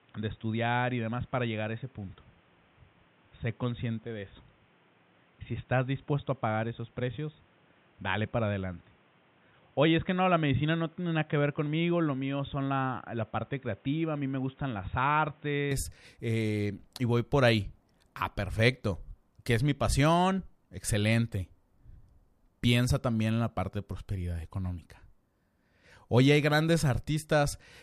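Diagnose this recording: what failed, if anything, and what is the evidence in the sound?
Until 15.7 s it's capped near 3.8 kHz, about 5 dB down, with faint background noise: likely the input switched to a poorer device at the driver.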